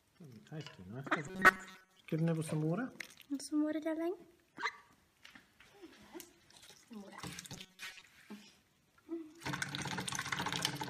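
From 1.28 to 1.99 s and 7.53 to 8.01 s, the sound becomes a rigid, metallic robotic buzz at 188 Hz, likely from a roughly 5.3 ms buffer repeated in place of missing audio. Spectrograms show even 188 Hz harmonics, and waveforms show identical repeating cycles.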